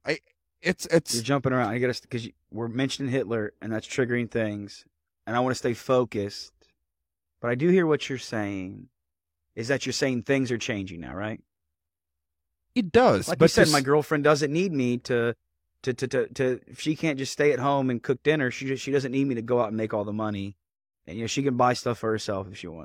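Speech, with no audible faults.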